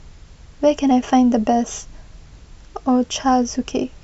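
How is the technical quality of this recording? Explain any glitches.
The technical quality of the recording holds up, with no glitches to explain.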